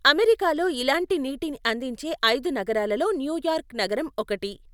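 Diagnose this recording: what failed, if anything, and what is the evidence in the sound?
No faults detected anywhere.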